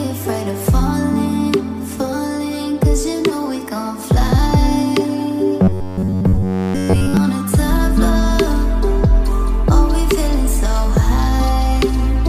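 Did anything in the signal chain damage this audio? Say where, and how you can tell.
Yes. From 5.62 to 7.17 s a rigid 93.8 Hz buzz signals robotic sound from repeated short buffers, likely a driver or buffer stage looping roughly 11 ms chunks. Codec warble wouldn't hold one fixed pitch.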